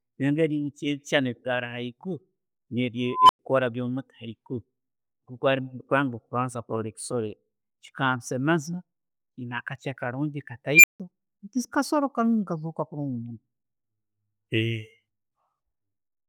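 At 3.10 s an unstable filter takes over the speech: a tone of around 1 kHz swells over about 196 ms until it clips, then the output drops out for 100 ms before the filter resets at 3.39 s. The same failure recurs at 10.74 s, this time a squeal near 2 kHz that reaches clipping in about 96 ms, followed by 160 ms of silence ending at 11.00 s. In both cases a recursive filter with bad coefficients feeds back on itself until its values overflow.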